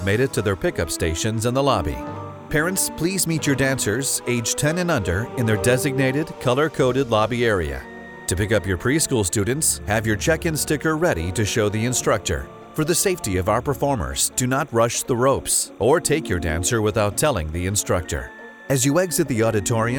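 Throughout the clip, timecode bleed sits faintly behind the sound, roughly 35 dB down: linear timecode at 29.97 frames per second leaking from an adjacent feed. It chirps steadily, flipping between tones near 1 and 2 kHz, and shows on a spectrogram as two persistent bands.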